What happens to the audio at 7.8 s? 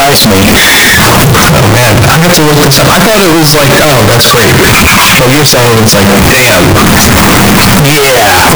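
At 7.8 s the speech is buried in loud, harsh distortion, as it is for the whole clip. The likely cause is signed and unsigned mixed up in 16-bit samples. The top bit flips, so every zero crossing jumps across the full range. Quiet moments sound as loud as the rest.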